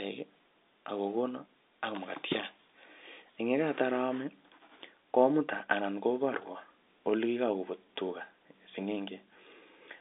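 Nothing is technically wrong with this speech clip, which carries the narrow band of G.711 telephone coding, with nothing above 3.8 kHz.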